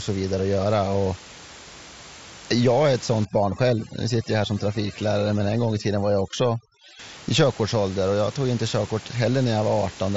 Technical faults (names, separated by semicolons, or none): overdone noise removal